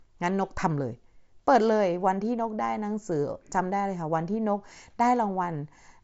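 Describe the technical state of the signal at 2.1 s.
At 2.1 s the speech is intact, carried cleanly through the Bluetooth mSBC headset codec, with nothing at that moment beyond the codec's normal light graininess on louder sounds.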